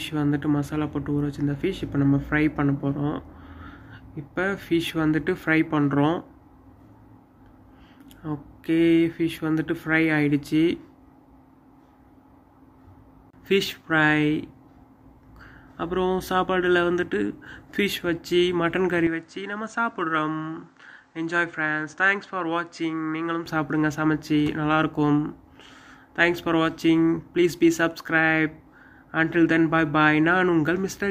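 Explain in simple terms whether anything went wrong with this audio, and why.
Something does go wrong between 19.07 and 23.46 seconds: the sound suddenly turns a bit duller and slightly quieter, with faint new background noise, and then snaps back. Nothing above about 8.9 kHz gets through in that stretch, and there's no gap at the change. That pattern is most likely an input switched to a poorer device, meaning the recording briefly jumped to another microphone or headset before returning to the original one.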